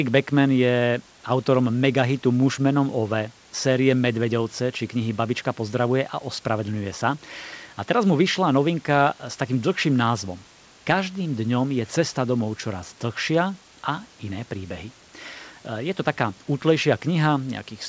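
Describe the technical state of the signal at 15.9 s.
At 15.9 s the signal is intact, with the speech carried cleanly through the call path's G.722 coding, its content ending at 8 kHz, and the room's background noise sitting about 31 dB below it.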